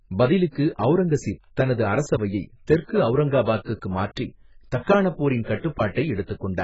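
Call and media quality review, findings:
AAC compression, throughout speech: dull, smeared band-limited sound, nothing above 7.7 kHz, warbling, fizzy sibilants, heavy codec damage. Likely AAC-LC at a very low bitrate, which fits about 12 kbps. Coarse quantisation against a hearing model. Unlike a plain low-pass filter, the damage is texture as well as missing top end.

Pre-echo, 0.51 to 0.55 s, about 46 ms, just before "அவுரங்கசீப் தனது அரசவையை தெற்கு": short hiss ahead of a softened attack. Transform codec spreads quantisation noise over the whole block, into the quiet lead-in.

Pre-echo, 5.44 to 5.47 s, about 30 ms, just after "மாற்றி தக்காணப்": same hiss before the onset, same block-spreading mechanism. Unlike reverb or echo, the noise precedes the attack and doesn't trail it.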